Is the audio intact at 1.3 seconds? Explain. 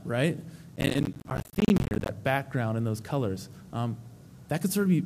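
No. From 0.76 to 2.09 s, processor overload crackle: dozens of missed deadlines, apparently on buffers of about 10 ms, each become a hard-edged silent gap, giving a gritty burst. A single dropout would be one gap.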